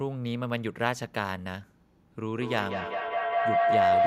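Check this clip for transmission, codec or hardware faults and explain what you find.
One fault is present: a feedback howl in the speech. It starts at 2.38 s and runs to the end of the clip. A microphone is picking up a loudspeaker on the same call. Each pass around that loop comes back louder than the last. The repeats narrow onto the pitch the loop favours, here around 700 Hz. The tone pulses roughly every fifth of a second and peaks about 7 dB above the speech.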